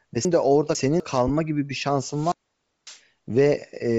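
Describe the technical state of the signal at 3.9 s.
At 3.9 s the speech is still passing through what is likely Bluetooth LC3 compression, present across the whole clip. The sound fits 7.5 ms frames at about 32 kbps, with upper bands stripped and refilled with noise, giving a plainly audible breathy, grainy edge.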